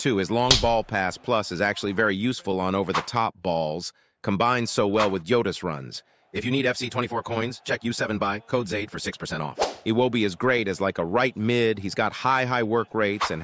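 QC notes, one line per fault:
No audible faults found.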